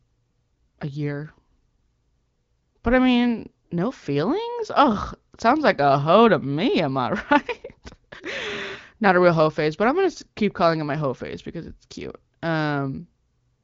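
No technical faults can be heard in this speech.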